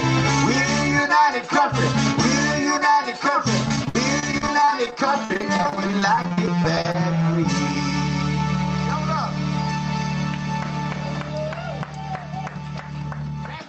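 From about 3.68 s to 6.95 s there's repeated packet loss, giving that robotic sound: dozens of short dropouts, the longest around 60 ms, each patched by stretching the last bit of audio. Roughly a fifth of that stretch is filled in, so it turns choppy.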